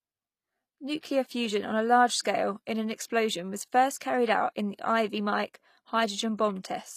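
Throughout the speech, the treble sounds bright but synthetic: s sounds come out gritty and lisping, with a metallic sheen, and nothing is present above 14.9 kHz. This is likely HE-AAC compression at a low bitrate, somewhere around 24 kbps. The codec keeps only the lower spectrum and fills the top by copying lower bands upward under a coarse envelope, so the rebuilt harmonics don't line up with the real ones.

From 1.01 to 1.03 s, just before "fusion on a large", a hiss lasting about 21 ms leads into the attack, which sounds softened and smeared. This is pre-echo. The attack lands late in a transform block, and the quantisation noise sized for that loud onset spreads evenly across the whole block, including the quiet stretch ahead of it.

The same pre-echo returns from 2.22 to 2.25 s, after "fusion on a large" and just before "in an explosion was". Here the smear runs longer, about 30 ms, so the hiss ahead of the attack lasts longer.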